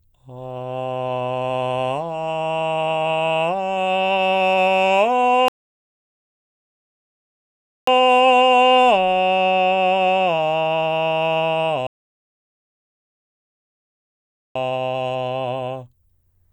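At 5.48 s the music cuts to silence and stays silent until 7.87 s. This is a rebuffering stall. The player used up its downloaded audio and waited for more to arrive. When the music returns, it picks up exactly where it stopped. Nothing is skipped, but about 2.4 s of dead air is added. A second stall runs from 11.87 s to 14.55 s. It adds about 2.7 s of silence before the music resumes seamlessly.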